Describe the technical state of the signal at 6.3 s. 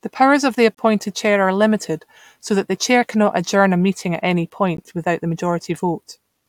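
At 6.3 s the signal is intact, with no audible fault at that point.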